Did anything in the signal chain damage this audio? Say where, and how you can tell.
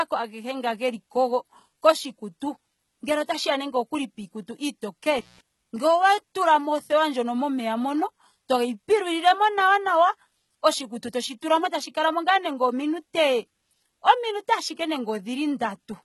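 Yes, two problems, at two different stages.

Codec stage: the whole clip carries heavy damage that points to HE-AAC compression as the likely cause. Nothing reaches above 11.8 kHz, and the top end sounds synthesised rather than captured. Spectral band replication copies lower bands upward under a coarse envelope, so harmonics don't line up across the crossover and s sounds come out gritty or lispy. That degree of damage fits a very low bitrate, around 16 kbps.

Analogue wiring: there's an intermittent contact from 5.18 to 5.41 s. The signal drops out for about 179 ms, with crackle at both edges and a faint hiss underneath while it's gone. That's a loose cable or plug briefly opening the circuit, so the source vanishes and only the residual line noise gets through until the contact closes again.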